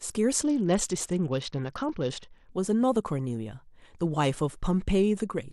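From about 0.45 s to 2.51 s the speech turns dull and muffled, its upper frequencies thinned out, with a gritty, granular noise riding on it until the sound brightens again. This is a Bluetooth SBC bit pool drop: the link came under strain and the encoder cut its bit budget, which fits a fall from a bit pool of 28 to 8, near 72 kbps. The top sub-bands lost their bits and the rest were quantised coarsely.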